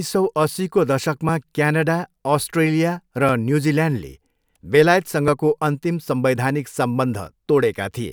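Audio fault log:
1.29–7.27 s, periodic USB or driver dropouts: from just after "सौ अस्सीको", a regular driver stall skips a few milliseconds of speech every 2.0 s, leaving evenly spaced ticks.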